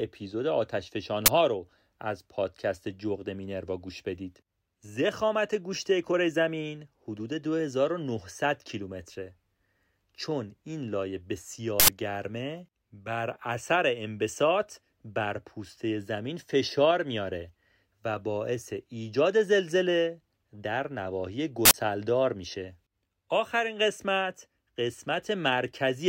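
At three points the playback system sent a buffer to the output before any audio had been written into it, so whatever stale data sat in that memory was played as samples. This uninitialised buffer fault first appears from 1.26 to 1.28 s as a roughly 21 ms burst, which fits a 1024-sample buffer. It returns from 11.80 to 11.88 s and from 21.65 to 21.74 s, each about 85 ms, consistent with 4096-sample buffers. The first is a sudden, loud crack, and the two longer ones are loud blasts of harsh digital noise.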